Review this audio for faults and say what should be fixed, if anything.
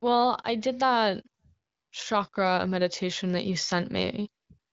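Automatic gain rising from 2.08 to 4.21 s: the AGC judged the input too quiet and raised gain about 4 dB, swelling speech and background together. Set a slower, capped AGC target or fix input level at the source. The AMR-WB (HD Voice) codec path, band-limited near 7.6 kHz, adds only light coding texture.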